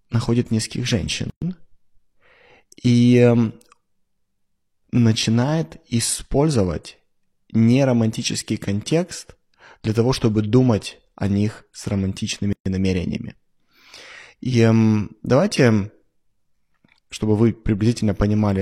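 At 1.30 s, right after "находит нескольких", the speech drops out for 119 ms and then picks up mid-flow at 1.42 s. The same thing happens at 12.53 s after "о них с романтичными", this time a 130 ms hole ending at 12.66 s. Both are gaps at a join of encoded pieces. Separately encoded chunks were butted together without trimming the encoder's start-up delay and end padding, so a short stretch of silence sits at each seam, with its edges smeared by the codec.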